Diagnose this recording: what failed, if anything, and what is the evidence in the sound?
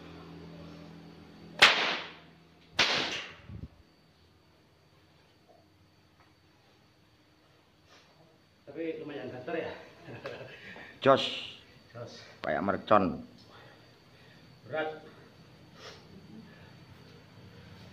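Nothing failed in any stage.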